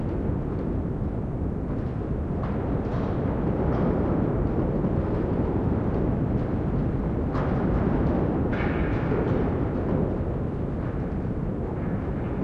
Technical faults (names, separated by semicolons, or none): none